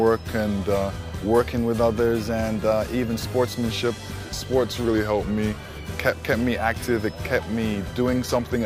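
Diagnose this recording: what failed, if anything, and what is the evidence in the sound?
From 1.40 s to 3.48 s the sound suddenly runs fast and sharp, speeding up by 5.43% with pitch rising about 91.5 cents, just under a semitone, before snapping back to normal. Because speed and pitch move together and the change is a clean step rather than a wobble, this is likely a drift correction step at the driver or buffer stage: clock-matching software briefly altered the playback rate to rebalance its buffer, then restored it.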